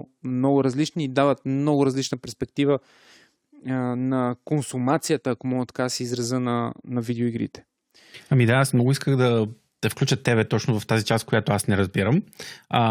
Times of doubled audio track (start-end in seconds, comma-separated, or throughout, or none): none